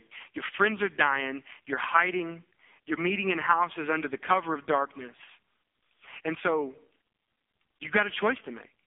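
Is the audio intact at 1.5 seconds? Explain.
No. At 1.5 seconds the speech runs through the AMR narrowband mobile codec, as it does for the whole clip. Nothing above 3.6 kHz survives, and the voice is heavily buzzy and synthetic, which points to a very low bitrate mode near 5 kbps.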